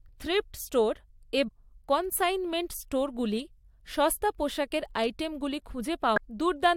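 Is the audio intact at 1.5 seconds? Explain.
No. Damaged data in the compressed stream, from 1.47 to 1.49 s, makes the decoder lose frame sync, leaving a brief chirp, squawk, click or short hole in the speech.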